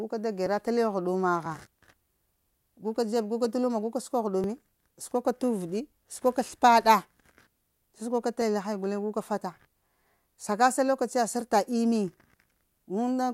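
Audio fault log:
0.46 to 12.4 s: periodic USB or driver dropouts. A short tick recurs almost exactly once a second, every 1.00 s, heard only while speech is present. Each time, a few milliseconds of audio are skipped outright. The waveform jumps across the gap, causing the click.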